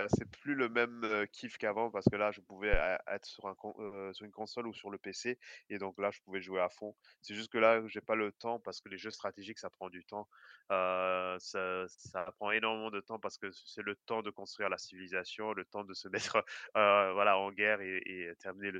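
Between 2.74 and 2.82 s, the supply on the live input was switched, and the voltage step passed through the coupling capacitors into the speech, causing a phantom power thump. It sounds like a deep, low thud peaking at about −18 dBFS and decaying within 20 ms.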